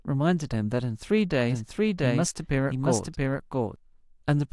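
A doubled audio track runs from 1.50 s to 3.76 s in this speech clip: a second, full-band copy of the speech sits roughly 0.7 s behind the original at about the same level, so every syllable is heard twice. The late copy carries no decay or room colour and switches in and out abruptly at both ends, which points to the audio likely being captured again through a slower path rather than to any acoustic echo.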